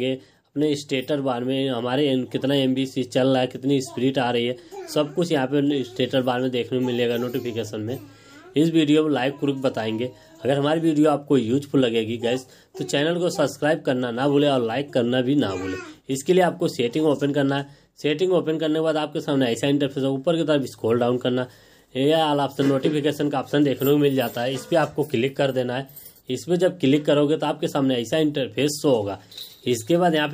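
No technical faults can be heard anywhere here.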